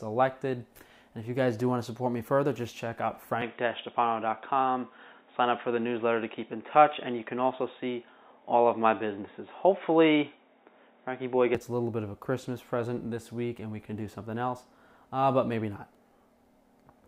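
From 3.42 s to 11.55 s the sound abruptly turns dull and boxy, with nothing above 3.8 kHz, then clears again at the end. The likely cause is an input switched to a poorer device. The change is instant and gapless, the level shifts modestly, and a faint new background noise appears well beneath the signal. Because tone, level and noise floor all change together, this reads as a device swap rather than a plain low-pass filter.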